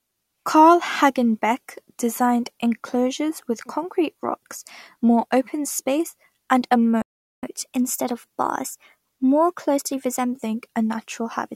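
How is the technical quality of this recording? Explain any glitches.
The recording has two linked playback glitches in the second half of the speech.

The first is a playback stall from 7.02 to 7.43 s. The sound cuts to silence for about 0.41 s in mid-flow. The player most likely ran short of incoming data, or its output thread was held up, so nothing reached the output. The gap is long enough to hear as a clear hole.

The second is catch-up at higher speed, from 7.43 to 10.43 s. To recover the lost time, the player resamples its queued audio and plays it at 1.1 times normal speed. Resampling moves speed and pitch together. So the speech sounds hurried and slightly raised, by roughly one and a half semitones. After about three seconds the catch-up ends. Speed and pitch then drop back to normal.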